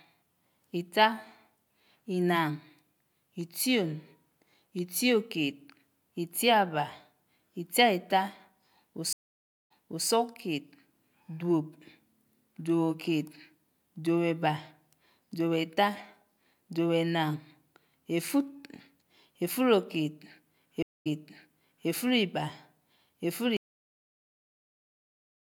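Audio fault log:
9.13–10.08 s and 20.83–21.89 s, stream reconnect: The speech drops out, about 0.58 s of silence in the first case and 0.23 s in the second. It then resumes behind where it stopped, so about 0.37 s and then 0.84 s of speech is heard a second time. The connection broke, and the player reconnected and started a fresh decoder mid-stream. The server resent a burst of recent audio, which is why the speech picks up earlier than where it left off.
23.57 s, cut-off end: The speech stops abruptly in the middle of a sound and falls straight to digital silence with no decay, staying silent through the end of the 25 s clip. The final buffers of audio were never written out or played, so the sound is truncated rather than ending naturally or fading.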